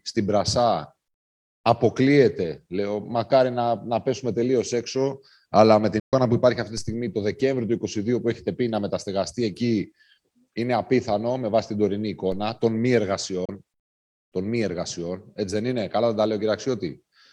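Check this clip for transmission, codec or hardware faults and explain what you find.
Two kinds of fault appear: two digital broadcast dropouts and two DC steps.

At 6.00–6.13 s and again at 13.45–13.49 s the receiver lost valid frames and muted. The sound fades out within about 3 ms and leaves a silent hole. The first hole fits four lost frames of 32 ms and the second fits one.

At 6.78 s and 12.32 s the waveform's zero line jumps abruptly, as when an offset input is switched in. Each step gives a brief low thump, then the offset drains away slowly, as a 2 Hz high-pass would remove it, while the sound continues unchanged.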